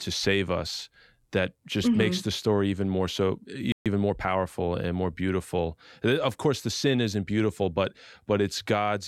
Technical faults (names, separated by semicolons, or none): playback stall; time-compressed catch-up